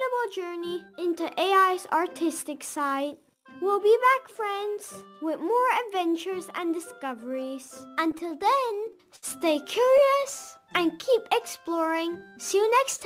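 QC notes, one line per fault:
8.11–9.24 s, repeated stalls (stutter): ten small hitches, about 145 ms of stretched sound in all, the longest 63 ms. Late packets kept draining the jitter buffer, so the receiver held the last sound until data arrived. Nothing's lost, but it drags.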